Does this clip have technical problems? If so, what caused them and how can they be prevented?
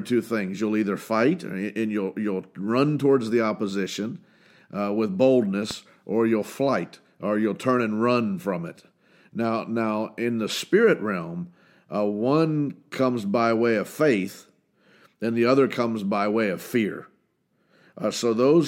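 Yes. There is a single loud pop from 5.71 to 5.74 s, between "towards the opposition with" and "or you'll flight or". It is a sharp click peaking about 10 dB above the speech, which carries on underneath it. The likely cause is a brief voltage pulse from a connector being touched, a switch, static discharge or a driver glitch, which the downstream circuitry turns into a short transient. To prevent it, secure cables and connectors, avoid switching during recording, and ground the equipment properly.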